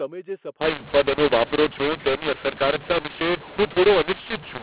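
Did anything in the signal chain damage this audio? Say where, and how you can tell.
Yes, at the codec stage. From 0.61 s to the end, the speech turns harsh and gritty and the pauses fill with hiss. That's mu-law and A-law mixed up: mu-law bytes read as A-law, so every level maps to the wrong step and near-silent samples get lifted.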